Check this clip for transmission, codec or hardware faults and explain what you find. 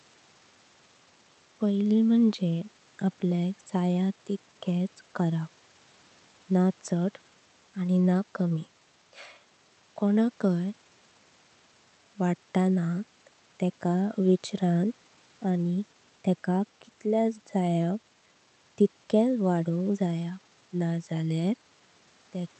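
No transmission, codec or hardware faults.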